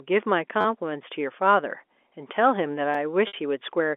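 At 0.61 to 0.65 s a short stretch of the telephone-band audio stutters, with the same tiny fragment repeating several times in quick succession and a hard join at each repeat. This is a repeated buffer: fresh audio missed its deadline, so the playback device replayed the last block of about 10.7 ms, which fits a 512-sample buffer. No audio is dropped, only delayed.

At 2.94 s the same repeated-buffer fault recurs more briefly. A single extra replay of that roughly 10.7 ms block produces a quick click-like hiccup.

From 3.27 to 3.34 s comes packet loss with pitch repetition. The sound turns into a held, buzzy tone that fades away, then the audio cross-fades back in. About 60 ms of audio was lost, and the receiver bridged the gap by looping the last pitch cycle. Because the gap outlasts the roughly 50 ms fade, the loop dies out before the audio resumes.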